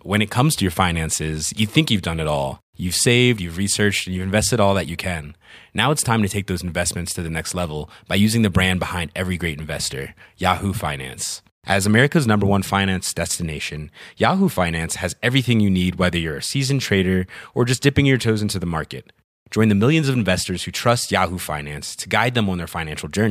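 No technical faults can be heard anywhere in the recording, and the signal stays steady and intact throughout.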